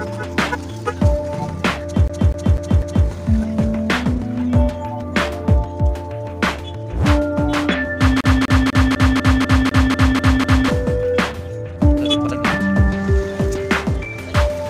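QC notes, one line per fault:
2.08 to 3.07 s and 8.21 to 10.68 s, CD stuck on one turn: a scratch keeps throwing the laser back one track, so the same 0.25 s slice repeats 4 and then 10 times, each jump marked by a brief mute. On a waveform or spectrogram it appears as identical blocks tiled every 0.25 s, separated by thin gaps.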